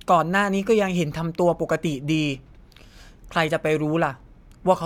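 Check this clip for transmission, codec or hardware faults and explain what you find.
Nothing in the speech points to a fault.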